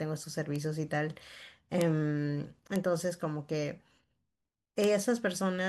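A flipped bit in the stored or transmitted speech data causes four bit error spikes, at 0.56, 1.81, 2.76 and 4.84 s. Each time, a sample value jumps by a power of two and snaps straight back, lasting what sounds like one or two samples. The result is a sharp, broadband tick unrelated to the speech around it, peaking at about -18 dBFS at 0.56 s and about -12 dBFS for the other three.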